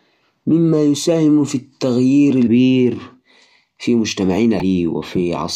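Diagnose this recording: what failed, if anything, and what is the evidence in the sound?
Damaged data in a compressed stream, at the codec decoding stage, breaks into this speech twice, as brief blips at about 2.46 s and 4.60 s, each under 20 ms. Corrupted bytes in the coded stream make the decoder misread the affected frame, producing a short glitch before it regains sync. A buffer dropout would instead leave a clean gap or click, and network loss concealment would smear or repeat the sound rather than produce this burst.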